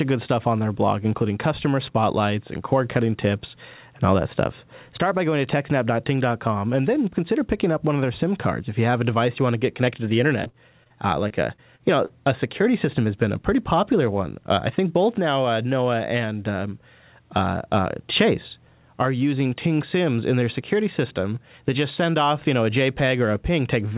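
Choppy stretches break up the speech from 10.44 to 10.92 s and again from 11.28 to 12.12 s, with short holes patched by smeared repeats of the preceding sound. This is repeated packet loss (robotic sound): packets kept going missing, and each gap, up to 59 ms in the first stretch and 41 ms in the second, was filled by extending the last audio. About a quarter of the first stretch is concealed. Throughout, nothing is heard above 4 kHz, which fits a narrowband G.711 call path.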